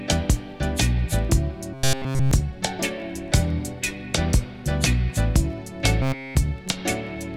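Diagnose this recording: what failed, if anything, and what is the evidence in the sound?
Robotic sound from repeated short buffers at 1.74–2.31 s and 6.02–6.37 s: a rigid 133 Hz buzz replaces essentially all the audio, likely a driver or buffer underrun looping about 7.5 ms.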